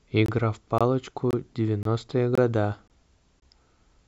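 The speech drops out in short, hard-edged holes of about 23 ms at 0.26, 0.78, 1.31, 1.83, 2.35, 2.88 and 3.40 s, one every 0.52 s or so. This is a gap between chunks: the audio arrived in 0.5 s pieces, and silence was inserted at each join.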